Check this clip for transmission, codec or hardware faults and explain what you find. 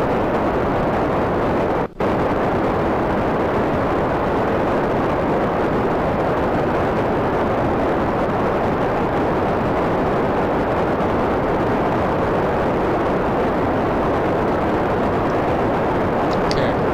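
No transmission, codec or hardware faults can be heard anywhere in the clip, and the signal stays continuous and stable throughout.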